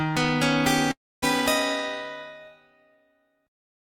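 At 0.91 s there's a call audio freeze: the sound smears into a fading buzz, then about 0.26 s of silence, and resumes at 1.24 s with nothing lost. That's likely delayed packets emptying the jitter buffer.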